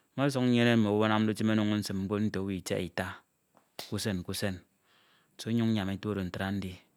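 No audible technical faults.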